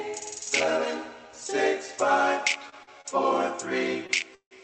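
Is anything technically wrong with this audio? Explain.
Yes. There are four short stalls from late packets and one call audio freeze, all in the second half of the clip. The audio comes through a call codec whose high-frequency limit near 8 kHz fits an Opus call path.

The short stalls from late packets occur at 2.69–2.80 s, 2.83–2.89 s, 3.01–3.06 s and 4.07–4.11 s. In each case a packet missed its playout deadline and the jitter buffer ran dry. The receiver held the last sound for about 28, 40, 33 and 22 ms respectively, then resumed from the same point. Nothing is lost, but each spot has a briefly frozen sustain with a slight buzz or dip.

The call audio freeze runs from 4.35 to 4.53 s and is the longest interruption, about 161 ms. It was likely caused by packets held up in transit, which emptied the jitter buffer. The last sound is extended as a decaying buzz or hiss that falls to silence for about 80 ms before the audio picks up where it stopped. 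This inserts a gap, and no content is missing.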